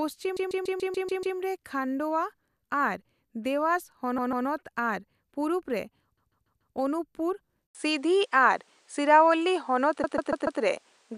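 From 0.36 to 1.37 s there are repeated frames: one 144 ms block of compressed audio is played seven extra times, adding about 1.0 s. The same slice of sound loops in a stutter. On a waveform, identical 144 ms shapes sit side by side. On a spectrogram, the same pattern is copied across. The block length fits a run of six 24 ms frames.

The same fault recurs from 4.18 to 4.47 s, with two extra plays adding 288 ms, and from 6.17 to 6.75 s, with four extra plays adding 576 ms.

At 7.67 s there is an 80 ms silence, after which the sound turns duller and boxier until the end. This is likely an input switched to a poorer device mid-recording. The new path carries nothing above 10.5 kHz, so on a spectrogram the top of the image is cut off flat from that point. The level also shifts by around 5 dB, and a faint new background noise appears well below the signal. The waveform shows the short gap and then a changed envelope.

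Inside that duller section, from 10.03 to 10.61 s, repeated frames occur again, with four extra plays adding 576 ms.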